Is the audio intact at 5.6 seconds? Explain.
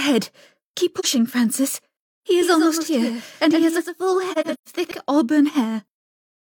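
Yes, at 5.6 seconds the audio runs cleanly with no break, dropout or other fault audible at that point.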